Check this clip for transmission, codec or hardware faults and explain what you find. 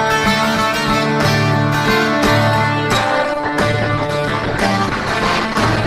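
One fault: the adaptive stream dropped to a lower bitrate from 2.97 s to the end at 5.87 s. With the connection slowing, a leaner encoding took over, consistent with Opus falling from about 64 to 16 kbit/s. Treble vanishes above 12.1 kHz and artefacts thicken. Unlike packet loss, the quality changes abruptly with no gap.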